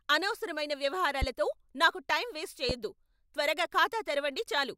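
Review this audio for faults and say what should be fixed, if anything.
Two loud pops break into the speech, each a single sharp transient with the speech continuing beneath it: one at 1.22–1.25 s, just before "నాకు టైం వేస్ట్", peaking about 10 dB above the speech, and a stronger one at 2.69–2.73 s, right after "నాకు టైం వేస్ట్", about 15 dB above. Each is likely a voltage step from a switch, connector or static discharge, shaped into a brief click by the following circuitry. Secure cabling and ground the equipment to prevent this.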